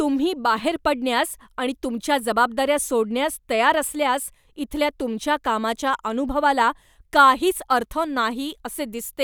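No dropouts, clicks, distortion or level jumps are audible anywhere in the speech.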